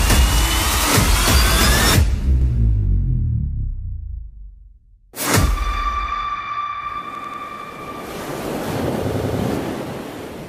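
At 0.74 s and 2.42 s a repeated buffer stutters once; at 7.15 s and 9.10 s it repeats three times. Each time, a late feed replays the last roughly 93 ms block, which fits a 4096-sample buffer. The spectrogram shows identical tiles joined by hard vertical seams.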